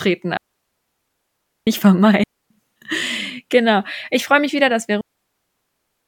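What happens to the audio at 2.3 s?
At 2.3 s the speech drops into a digital wireless dropout, a clean hole of near silence running from 2.23 to 2.51 s, about 271 ms in all. The wireless receiver lost too much data on the link and muted itself with a very short fade rather than pass corrupted audio. What sets it apart from an analogue radio dropout is the absence of any hiss, crackle or noise burst on either side; the sound simply vanishes and returns.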